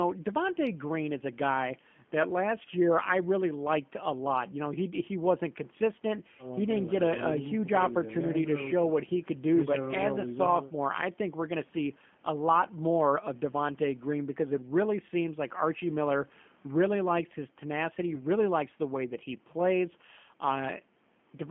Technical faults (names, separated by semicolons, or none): G.729 codec; VoIP packet loss concealed by the speech codec